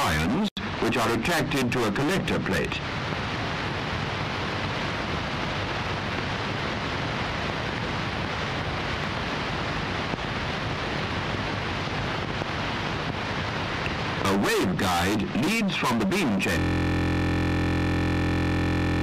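A system hang loop begins at 16.59 s and runs to the end: the system froze while the audio hardware kept replaying one 23.22 ms slice of its ring buffer, which fits a 1024-sample buffer. Repeated around a hundred times, it becomes a steady 43.1 Hz buzz.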